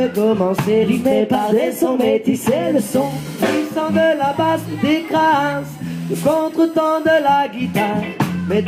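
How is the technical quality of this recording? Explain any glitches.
The recording carries one glitch: a USB whine from 2.63 to 7.33 s. A steady 1 kHz tone sits about 35 dB below the signal, set by the bus's 1 ms frame timing, as current pulses leak through shared power or ground into the audio path.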